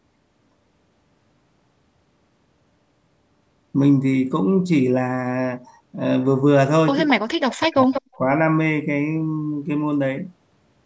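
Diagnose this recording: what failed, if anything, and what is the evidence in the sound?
Echo leak, call processing stage. A faint delayed copy appears at 7.08 s, 219 ms late. A much louder copy follows from 7.84 to 8.15 s, 188 ms late. The likely cause is incomplete echo cancellation.

Speech suppressed in double talk, also call processing. From 7.14 to 8.19 s the speech is turned down, by around 40 dB at worst. The canceller likely turned down its own talker along with the echo.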